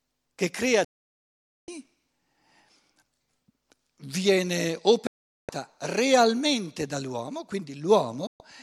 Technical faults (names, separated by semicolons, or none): digital broadcast dropout